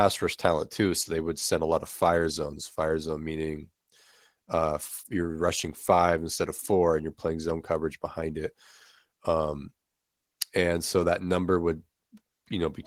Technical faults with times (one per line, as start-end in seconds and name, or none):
0.00-12.87 Opus voice compression